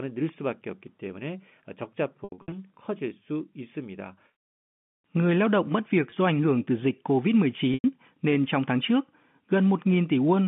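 Packet loss with pitch repetition hits at 2.24 to 2.52 s, with about 200 ms of scattered gaps. At 6.1 s, between "lao động mất việc" and "do ảnh hưởng từ", comes a 20 ms gap. Another 100 ms is lost at 7.74 to 7.84 s, before "nên trong tháng trước". The receiver repeats the last pitch period to bridge each gap, so short gaps briefly hold a buzzy tone while longer ones fade into silence through the telephone-band audio.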